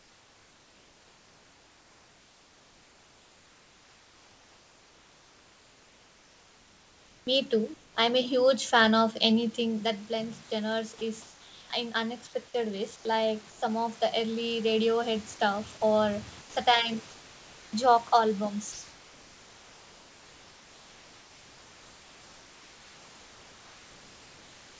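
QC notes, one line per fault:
0.0–7.95 s, 11.22–11.7 s, 12.96–13.62 s, 17.10–17.73 s and 18.72 s to the end, comfort noise in place of the background: the room's real texture gives way to a flat, featureless hiss, about 2 dB quieter at 11.22 s, 17.10 s and from 18.72 s, likely because the sender stops transmitting in pauses and the receiver fills in synthetic noise.
7.25 s, onset clipped by the voice detector: the sound snaps in hard, missing about 20 ms of its soft start. That's likely the voice detector being a beat late to wake up, so comfort noise plays over the opening.
13.50–13.62 s and 16.41–16.56 s, sound dropped by the voice detector: a short stretch of sound, about 90 ms and then about 60 ms, is swapped for steady noise. The detector likely mistook quiet sound for background and briefly stopped sending.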